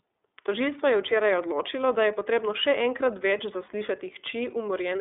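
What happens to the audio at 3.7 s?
At 3.65 to 3.69 s there are lost iLBC frames: a gap that fits a single 30 ms frame. The decoder fills it by repeating the last pitch cycle blended with noise, so it sounds like a briefly held, slightly buzzy vowel before the sound snaps back. On a spectrogram it looks like a short smear of flat, repeated harmonics; on the waveform, periodic cycles that don't follow the surrounding envelope.

This sits within the iLBC codec coloration that runs throughout. The band is limited to roughly 300 Hz to 3.6 kHz, and the coding is plainly audible as a rough, synthetic edge. A spectrogram shows empty space above 3.6 kHz.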